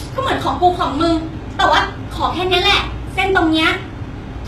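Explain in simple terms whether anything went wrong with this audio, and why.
Something did go wrong, and it runs through the whole clip: the speech has the telltale sound of heavy HE-AAC compression, likely from squeezing it into a very small file. Nothing above about 12.3 kHz survives. This codec keeps only the lower part of the sound properly and fakes the treble by copying lower bands upward. Those copied highs don't quite match the real ones, so the s sounds come out gritty, metallic or lispy.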